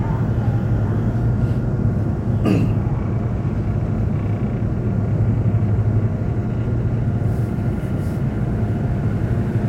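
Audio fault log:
No fault is heard anywhere in this recording of sounds. Nothing in it calls for a logged entry.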